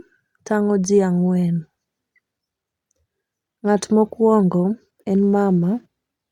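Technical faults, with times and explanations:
No technical faults can be heard in the signal of this speech recording.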